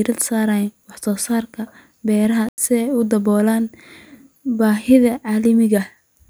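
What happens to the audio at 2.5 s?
Right around there the speech drops out completely, from about 2.49 to 2.58 s, so roughly a tenth of a second of dead silence that starts with a hard edge. That's a corrupt frame muted: some compressed frames got damaged bits, the decoder rejected them, and the player filled the gap with silence instead. The length fits about four lost frames in a row. Timing stays intact, so the speech picks up right where it should afterwards.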